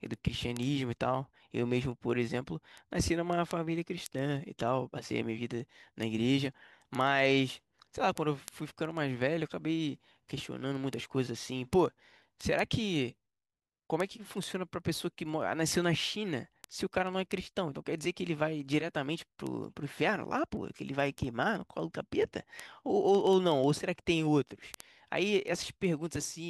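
From 0.14 s to 26.46 s the speech carries word clock ticks: a steady train of sharp ticks, roughly fourteen per second, several hundred in all, with uneven strength. The receiving device was running on its own clock instead of locking to the digital sender's. The two drifted apart by a few hundred parts per million, so at each slip a single sample was dropped or repeated. Random clicks or crackle would scatter irregularly. This metronomic spacing points to a clock mismatch.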